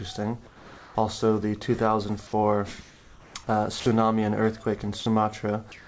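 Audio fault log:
0.47–0.95 s, 2.81–3.35 s and 5.72 s to the end, comfort noise in place of the background: the quiet background, about 23 to 27 dB below the loud parts, becomes a steady, featureless hiss, about 2 dB quieter in the first gap, likely because the sender paused transmission and the receiver synthesised filler noise.
3.80–3.86 s and 5.00–5.06 s, sound dropped by the voice detector: about 50 to 60 ms of sound vanishes into flat noise, then returns, likely because the sender's detector mistook quiet sound for background and stopped sending. Throughout, nothing reaches above 8 kHz, which fits a G.722 call path.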